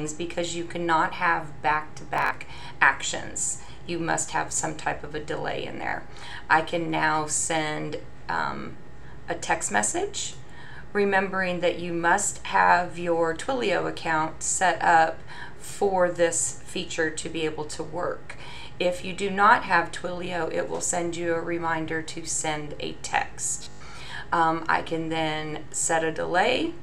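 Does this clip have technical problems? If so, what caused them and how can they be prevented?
Yes. Bluetooth stutter: audio packets arrived late or not at all, so the receiver replayed its last buffer, causing buzzy repeats before skipping ahead at 2.14–2.31 s (102 ms lost), 5.89–5.93 s (41 ms) and 23.64–23.81 s (122 ms). Shorter range and less 2.4 GHz interference prevent it.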